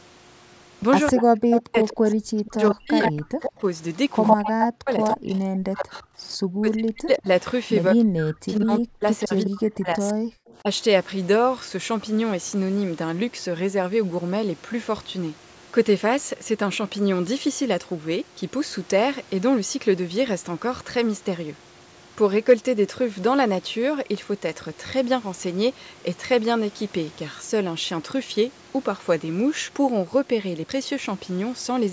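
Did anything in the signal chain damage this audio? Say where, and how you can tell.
Yes, in the call-processing stage. From 1.07 to 7.66 s a delayed copy of the speech trails the original by about 108 ms, at roughly the same loudness as the direct sound. A second, much fainter copy, around 20 dB down, follows at a 141 ms delay from 9.20 to 10.57 s. This is an echo leak, likely from a far-end loudspeaker whose echo canceller let its microphone pickup back into the call. Room reverberation would be different: it smears smoothly and doesn't arrive as a discrete repeat at one fixed delay.

Overlapping those stretches, from 1.1 to 10.68 s, the talker's level repeatedly collapses, by as much as around 40 dB at its deepest. The losses add up to roughly five seconds of gaps and dips. This is speech suppressed in double talk, likely the echo canceller muting the talker while it tried to remove echo during simultaneous speech. 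Packet loss also leaves gaps, but those are short, irregular dropouts scattered across the clip. Here the cuts are pumping and gain-like, and they cluster in the double-talk stretch. The band ending at 8 kHz comes from the normal call microphone path.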